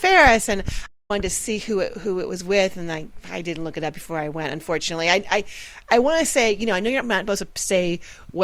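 At 0.86 s a playback stall cuts the sound to silence for about 230 ms, until 1.11 s, likely because the player ran short of data before resuming.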